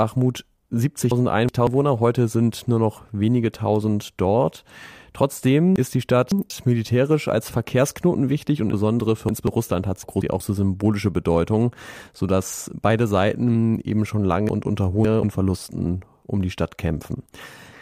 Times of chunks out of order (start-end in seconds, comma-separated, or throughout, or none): 1.11-1.67, 5.76-6.50, 8.73-9.47, 10.03-10.40, 14.49-15.23